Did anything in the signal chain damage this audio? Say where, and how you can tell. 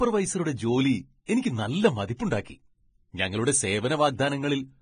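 Yes, at the codec stage, throughout the speech. Nothing is present above 9.7 kHz. The treble is hissy and grainy, and consonant attacks are blurred. This is likely heavy Vorbis compression at a low bitrate near 20 kbps, where coarse quantisation turns fine detail into noise.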